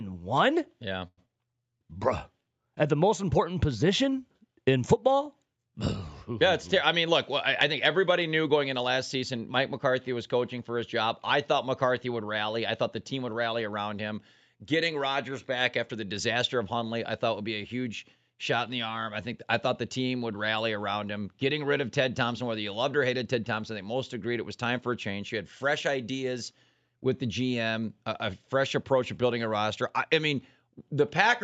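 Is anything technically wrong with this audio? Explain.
Yes, there are four call-path glitches, three of them bunched in the first two seconds of this speech clip, heard through audio that tops out around 8 kHz, as you'd expect from Opus at that bandwidth.

First, a call audio freeze from 1.07 to 1.19 s. The sound hangs and stretches into a fading buzz for about 100 ms, ending in roughly 50 ms of silence, then picks up where it left off with nothing lost. The likely cause is delayed packets draining the jitter buffer.

Right after, a skip ahead at 1.25 to 1.28 s. Playback jumps forward, dropping around 70 ms of speech, and the two sides are stitched together with only a tiny fill of about 9 ms. That stretch was dropped on the way or by the jitter buffer overflowing, while later audio was already waiting.

Then a jitter buffer slow-down from 1.71 to 1.99 s. To rebuild its reserve, the receiver repeated short pitch periods, adding 46 ms. 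Speech runs at about 87% speed with the pitch unchanged, so sounds come out drawn out, maybe with a slight warble.

Finally, a jitter buffer speed-up from 7.72 to 9.41 s. The buffer was holding more than its target, so it snipped out small pitch-period chunks, about a tenth of a second in total. Speech runs about 5% fast at the same pitch and sounds slightly hurried.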